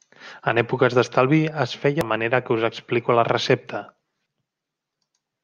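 Speech with audio missing between chunks: roughly a third of a second skips at 2.01 s, after "èpoques d'estalvi es", and at 4.26 s, after "explico a la recepta", likely dropped at 2.5-second chunk boundaries.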